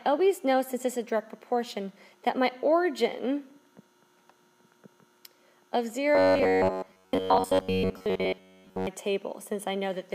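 From 6.15 to 8.87 s, new audio likely arrived too seldom, and repeated short buffers filled most of the gap: robotic sound with a rigid, metallic 93.8 Hz buzz.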